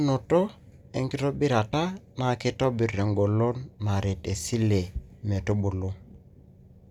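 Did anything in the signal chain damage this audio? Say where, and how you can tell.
Yes. At 1.72 s the speech has a brief 10 ms smear of noisy, unpitched sound where it should be continuous. That is lost LE Audio frames at the Bluetooth codec stage: the LC3 decoder refilled the gap with the previous spectrum under random signs. A hard dropout would give silence or a click instead.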